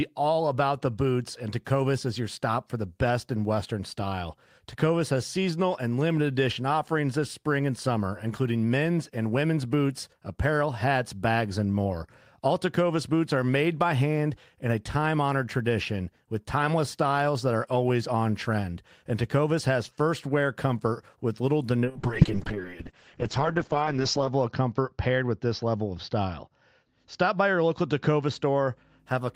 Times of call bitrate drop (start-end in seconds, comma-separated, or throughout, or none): 21.85-29.05